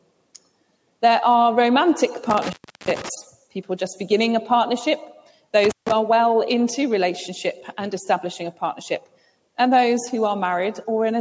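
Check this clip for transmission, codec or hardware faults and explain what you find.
One hardware fault shows up twice: intermittent contact, at 2.30–3.09 s with a 0.34 s open gap and at 5.64–5.92 s with a 0.15 s gap. A loose connection breaks, so the sound drops to faint hiss, with crackle at each edge. That crackle sets it apart from clean digital dropouts. The call-style band limit at 8 kHz is normal, not a fault.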